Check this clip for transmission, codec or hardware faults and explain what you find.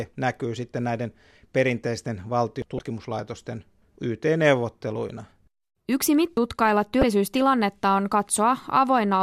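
Two kinds of fault turn up, each occurring twice.

At 2.62 s, just after "näkyy sitten näiden perinteisten", and again at 6.37 s, about 300 ms of speech abruptly skips away. This is likely audio missing between chunks, lost at 4-second block boundaries.

From 2.76 to 2.79 s and from 7.00 to 7.03 s, brief glitches occur. This is damaged data in a compressed stream: corrupted frames make the decoder lose sync and jump ahead.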